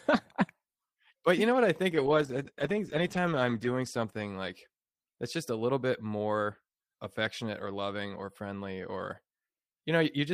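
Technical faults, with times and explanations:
1.95–4.87 s, call bitrate drop: just after "know what I think", the speech turns coarse and watery, with the top end dulled, staying at its worst for about 1.8 s before clearing by "that's just a little". The encoder was forced onto far fewer bits, which fits a fall from about 32 to 13 kbps, so it quantised more crudely and trimmed high frequencies. Unlike packet loss, nothing drops out or repeats. The degradation is continuous.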